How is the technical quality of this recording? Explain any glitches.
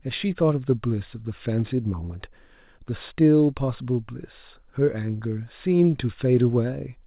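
No glitches are audible; the speech has the narrow bandwidth of A-law telephone coding at 8 kHz, which is how that channel is designed to sound.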